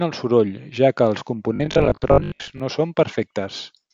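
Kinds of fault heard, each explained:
Robotic sound from repeated short buffers: audio likely arrived too seldom, so short chunks were replayed every 20 ms, giving the speech a rigid 50 Hz buzz after "soroll ja que els".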